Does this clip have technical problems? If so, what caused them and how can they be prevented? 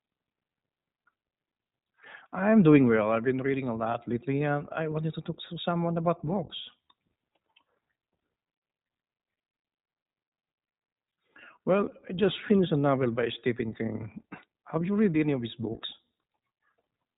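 Yes. The speech has iLBC codec damage throughout: a narrowband, slightly rough, synthetic sound with nothing above 3.8 kHz. The texture suggests 20 ms frames, each coded separately. To prevent it, record or transmit with a wideband codec.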